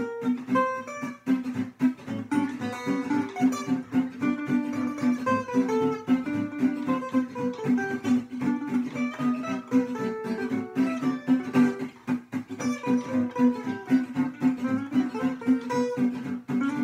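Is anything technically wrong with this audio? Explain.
No, nothing technically wrong can be heard in this audio. There is nothing here that needs repair.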